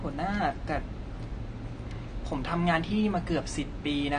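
From start to finish the speech sounds dull and smeared, with nothing above 9.6 kHz and an obvious swirly, warbling texture. That's likely AAC compression, AAC-LC squeezing too few bits per frame, which fits a low bitrate around 32 kbps.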